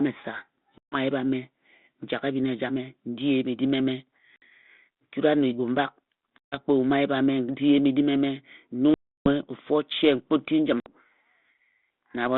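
Packet loss on an ADPCM call cuts hard-edged silent holes at 0.78 s (140 ms), 4.36 s (60 ms), 6.38 s (140 ms), 8.94 s (320 ms) and 10.8 s (60 ms) in this 32 kbit/s G.726 speech. Each gap desynchronises the decoder's predictor and step size, so speech resumes with brief distortion before settling.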